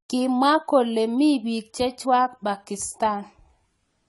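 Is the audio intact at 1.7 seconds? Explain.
No. At 1.7 seconds the speech carries AAC compression damage, and it runs through the whole clip. Nothing sounds above about 11.5 kHz, so the top end is dull. Consonants sound smeared and sibilants have a fizzy, warbling texture. This is likely low-bitrate AAC-LC coding, which fits a rate around 32 kbps. The encoder quantises each frame's spectrum coarsely, cuts the highs and leaves gaps or noise in the bands.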